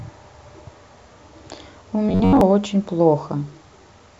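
From 2.09 to 2.41 s, new audio likely arrived too seldom, so playback kept looping a tiny stretch, which fits an 11 ms buffer, and skipped most of the real signal. The result is robotic sound from repeated short buffers: speech hardens into a metallic buzz fixed at 93.8 Hz.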